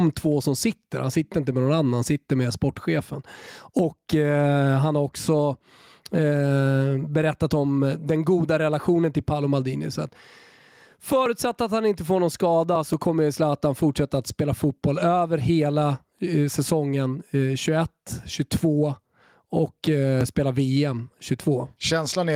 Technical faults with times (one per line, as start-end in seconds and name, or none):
0.00-22.35 gain pumping